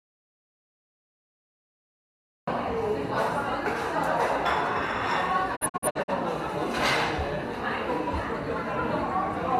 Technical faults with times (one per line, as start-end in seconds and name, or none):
0.00-2.47 audio dropout to silence
5.55-6.12 digital broadcast dropout